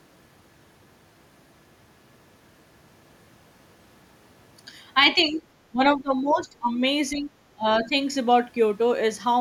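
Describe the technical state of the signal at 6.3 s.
At 6.3 s the speech is under double-talk suppression, which runs from 5.71 to 6.81 s. Level dips by as much as about 20 dB, thinning and partly cutting out. The likely cause is an echo canceller attenuating the near talker while both sides speak.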